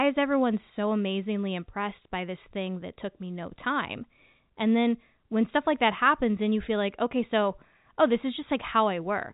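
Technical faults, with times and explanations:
No technical faults are audible anywhere in this recording.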